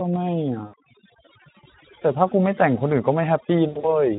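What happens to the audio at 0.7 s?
Around 0.65 to 0.74 s the speech is stretched into a buzzy tone or coloured noise that fades in level, then returns weak and distorted before recovering. This is VoIP packet loss concealed by the speech codec. About 80 ms of audio never arrived, which fits roughly four 20 ms frames. The Speex decoder filled the gap by repeating its last pitch and spectral shape at falling gain, and because each frame builds on the previous one, the damage persists briefly once data resumes.

Over the same stretch, as throughout the clip, the background drops and breaks up into twinkling specks. That is overdone noise removal. A noise reducer set too aggressively pulls individual frequency bands far down whenever they come close to its noise estimate, and the quieter parts of the speech are suppressed along with the background.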